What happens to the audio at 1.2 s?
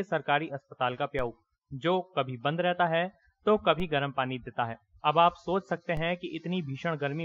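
At 1.19 s the audio has a DC step: the zero line of the waveform suddenly shifts by about -27 dBFS, as if an offset had been switched into the signal path. A 5 Hz high-pass then pulls the baseline slowly back toward zero. The jump is heard as a brief low thump. On the waveform the trace lifts off centre and drifts back. A spectrogram shows a short vertical smear concentrated at the lowest frequencies.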